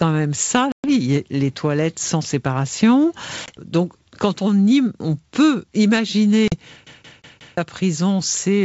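Packet loss on an ADPCM call occurs three times: 0.72 to 0.89 s, where about 120 ms goes missing (around seven packets); 3.46 to 3.49 s, a single 20 ms packet; and 6.48 to 6.55 s, about 40 ms or two packets. Each gap drops to silence with hard edges. The receiver's adaptive predictor and step size lose track of the sender's, so the speech resumes slightly distorted before settling.

A CD stuck on one turn follows from 6.86 to 7.57 s. The same 178 ms fragment plays four times, as if a scratch keeps throwing the pickup back to one spot on the disc. A tiny mute marks each jump. This gives the quick, evenly spaced stutter of a skipping CD. It arrives only about 0.3 s after the last dropout.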